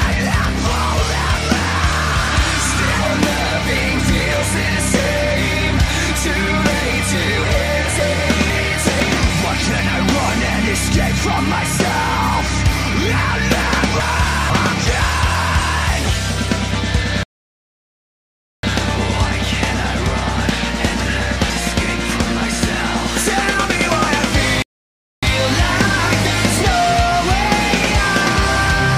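Between 8.0 and 9.0 s, chunks out of order: a 500 ms chunk arrived one chunk late and plays after its successor, so the sound jumbles briefly across the hard joins. The same swap recurs at 14.0 to 15.0 s. At 17.23 s a rebuffering stall occurs: the player ran out of downloaded audio and halted, so the sound drops to silence for 1.4 s and resumes at 18.63 s exactly where it stopped. Between 20.5 and 21.5 s, another 500 ms chunk plays one chunk late, again jumbled. A second rebuffering stall at 24.62 s inserts 0.6 s of silence before the sound continues at 25.23 s.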